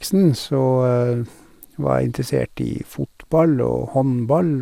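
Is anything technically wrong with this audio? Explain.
Yes, there's a problem. Generation loss throughout: the speech sounds swirly and hollow, consonants smeared, nothing above 17.3 kHz, likely from roughly ten rounds of 128 kbit/s MP2-style re-encoding compounding.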